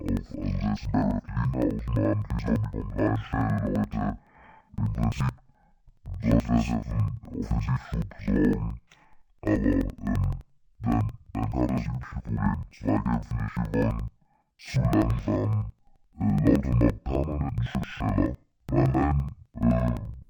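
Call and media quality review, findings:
Interleaved audio read as planar, throughout: speech an octave low, doubled, choppy at about 11.7 Hz. Halves of each 85.33 ms block are read as separate channels and play together, which fits 4096-sample blocks.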